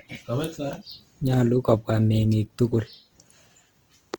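Throughout the speech, the sound is grainy, rough and noisy. This is likely Opus compression in its music mode. Short of bits, it fills bands with folded or noise content. The damage fits a rate near 24 kbps. Bandwidth stays full, to about 20.2 kHz.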